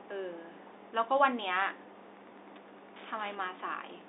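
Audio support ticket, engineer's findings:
Wi-Fi interference, 2.16–4.08 s: ticking every 102.4 ms, roughly 25 dB under speech. Radio beacon rectified in audio circuit; ten ticks a second, unlike GSM buzz at 217 Hz.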